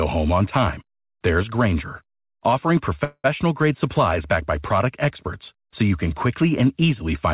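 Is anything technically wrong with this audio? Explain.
Yes, there's a call audio freeze in this speech from 3.04 to 3.26 s. The audio stalls, the last sound is stretched out into a fading buzz for about 200 ms, and the final 40 ms or so go silent before speech picks up exactly where it left off. That's likely packets arriving late and the jitter buffer running dry. Nothing is lost, but everything after it lands about 200 ms later. The whole clip is also cut off above 4 kHz, which fits a narrowband call codec like G.711.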